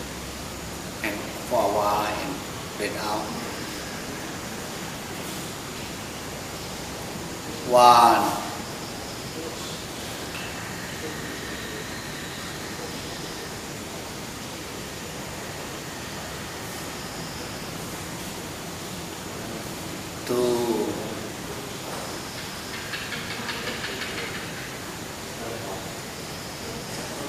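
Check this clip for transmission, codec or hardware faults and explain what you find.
Nothing here points to trouble anywhere along the chain, so there's nothing to flag.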